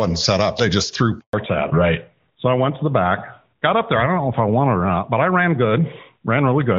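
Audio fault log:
1.19–1.33 s, handover gap: right after "just threw" the speech falls away within a few tens of milliseconds and stays silent for 140 ms before resuming. This is the call being passed from one network to another, with no speech frames delivered during the switch. Unlike a single dropped packet, which a decoder usually smooths over with a short concealed sound, this is a clean hole of true silence, and whatever was said in it is gone.
1.33 s to end, fallback to narrowband: from the moment speech returns after "just threw", everything above 4 kHz is missing for the rest of the clip, so sibilants and fricatives lose their edge and the voice sounds duller and rougher. Before the gap the sound is clear wideband HD Voice with little or no codec damage, which fits AMR-WB at a high rate. Afterwards the sound points to the call having dropped to the older AMR narrowband codec, probably at its top rate of around 12.2 kbit/s. 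A low-pass filter or muffled microphone would not line up with the handover like this. Here the bandwidth drops at one instant, right at the network switch, and never recovers.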